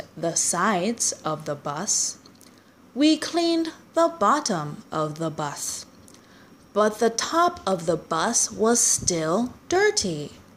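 Clock drift buffer slips run from 0.58 to 9.76 s: about ten regular clicks every 1.02 s, likely from two unsynchronised clocks roughly 150 ppm apart dropping or repeating a few samples.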